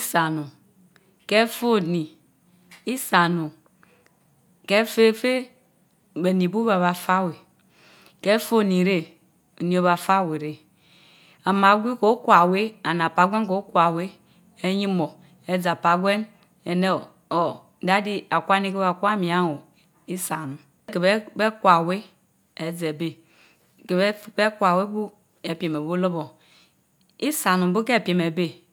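No technical faults occur at any point in the recording, so there is nothing to describe in time order.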